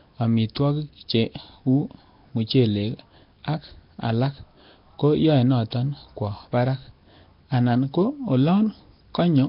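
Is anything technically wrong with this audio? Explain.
Yes. The speech carries Nellymoser compression damage from start to finish, and the damage is heavy. Nothing is heard above about 5.3 kHz. The voice has a rough, hissy halo and a smeared, underwater quality. This is likely the Nellymoser Asao codec once used for Flash microphones. It codes short blocks with very few bits. Weak bands get no bits and are filled with noise instead. The dullness and grit fit a bitrate around 22 kbps.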